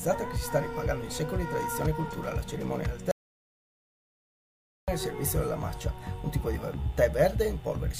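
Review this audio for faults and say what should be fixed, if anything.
Audio dropout to silence, 3.11 to 4.88 s: the sound cuts mid-flow to silence, with no room tone, for 1.77 s, likely from a lost input. Secure cables and connections, and watch input meters while recording so a dead signal or accidental mute is caught immediately.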